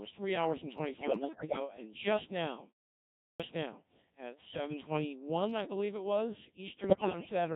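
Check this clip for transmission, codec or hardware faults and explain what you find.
Three faults are audible: heavy Codec 2 vocoding throughout, two bursts of bit errors on digital voice radio, and one clipped start after a pause.

The whole 7.6-second clip passes through the Codec 2 vocoder, and the damage is heavy. Only pitch, voicing, level and a coarse spectral envelope survive. The decoder rebuilds speech from sine waves, so the original waveform is gone. The result is robotic and buzzy. The very low detail fits a rate near 1.3 kbit/s.

Bit errors on digital voice radio hit twice. The first runs from 0.97 to 1.60 s, right after "three hours and". The second runs from 6.84 to 7.29 s, after "I believe it was". Roughly one bit in seven seems wrong. At such a low rate, each bit steers pitch, level, voicing or tone colour for a whole frame. The synthetic voice lurches in pitch and loudness. 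It dissolves into warbles, bleeps and garbled robotic sound.

A clipped start after a pause occurs at 3.27 s. It follows a silence of about 0.6 s after "just now". The output device appears to drop into sleep during the gap and must wake again. About 127 ms is swallowed before "now at". That word bursts abruptly out of silence, missing its opening sounds.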